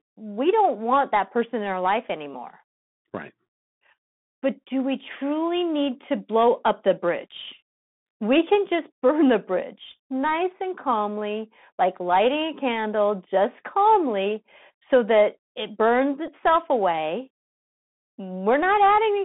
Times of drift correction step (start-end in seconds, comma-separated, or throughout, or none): none